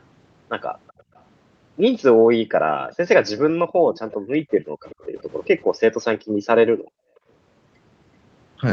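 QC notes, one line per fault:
0.87–1.22 s, 2.81–2.95 s and 3.94–5.47 s, echo leak: a faint delayed copy of the speech trails the talker by 379 ms, quietest at first and most noticeable in the long stretch. It's likely a far-end speakerphone whose echo canceller let some loudspeaker pickup slip back down the line.
1.03–1.08 s, 2.41–2.56 s, 3.82–5.09 s and 6.22–7.27 s, background gated by the echo canceller: the room tone dips out while the canceller clamps the mic, by about 27, 40, 23 and 40 dB respectively. The first two are quick blips, and the later two add up to roughly half a second of missing ambience each.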